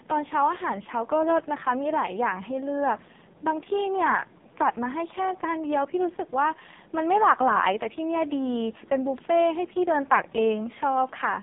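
From start to finish, the speech passes through an AMR narrowband mobile codec. The band is squeezed to roughly 150 Hz to 3.7 kHz, with nothing at all above 3.7 kHz. That removes the crispness of consonants and leaves a hollow, telephone-like tone. The codec rebuilds speech from a coarse vocal-tract model and a few excitation pulses per frame. The damage is heavy, which fits a low AMR-NB mode of about 5.15 kbps. The voice sounds buzzy, smeared and synthetic.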